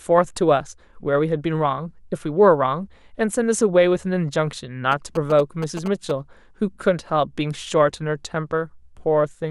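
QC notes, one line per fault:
4.92–6.11 s, GSM signalling bursts. A galloping dit-dit-dit of short buzzes sits over the speech at 216.7 Hz, roughly 10 dB below it. A nearby 2G phone is signalling, and the audio circuit rectifies its radio bursts into audible buzzes.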